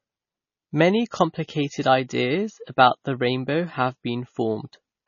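Throughout, nothing survives above 6.9 kHz and the speech swirls wetly, likely heavy MP3 compression near 24 kbps. Plain low-pass filtering would lack that swirl.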